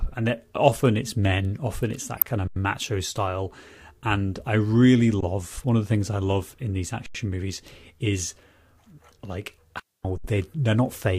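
Corrupt frame decoded at 2.15 to 2.22 s: the decoder played damaged compressed frames, around five of them in a row, and misread gain and spectral data put energy where the speech had none. The result is a loud burst of chirpy, noisy sound lasting about 70 ms. A second corrupt frame at 8.81 s is a single very brief, very quiet blip, since only about one frame was misdecoded and its wrong energy sits far below the speech.

Underrun with held sample at 2.48 to 2.56 s, 5.21 to 5.23 s, 7.06 to 7.15 s and 10.18 to 10.24 s: each time the output buffer emptied, and the converter froze on its last value. The waveform goes flat and the speech stops dead for 85 ms, 21 ms, 85 ms and 64 ms respectively. The 85 ms and 21 ms gaps fit buffers of 4096 and 1024 samples at 48 kHz. Virtually nothing was skipped, so playback picks up where it paused and the restart is soft rather than a sharp click.

Digital wireless dropout at 9.80 to 10.05 s: the radio link lost too much data and the receiver muted with a very short fade. 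This leaves a clean hole of near silence about 250 ms long, with no noise burst on either side.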